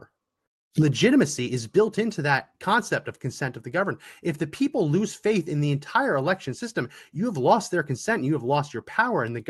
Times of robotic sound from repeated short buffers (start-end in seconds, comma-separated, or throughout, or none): none